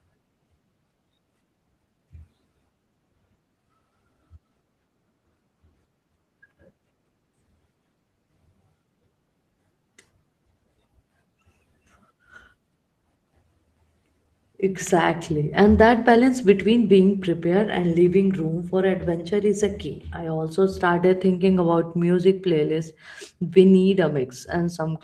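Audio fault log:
No faults detected in this speech recording.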